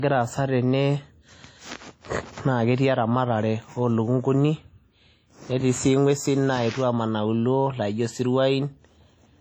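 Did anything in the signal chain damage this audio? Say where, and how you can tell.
Yes. Low-bitrate audio saved at a high bitrate, throughout the speech, at the codec stage. The file carries a high-rate MP3 wrapper with nothing above 20.1 kHz, but the damage likely comes from an earlier low-rate encode, perhaps around 32 kbit/s, whose losses the re-encode cannot restore.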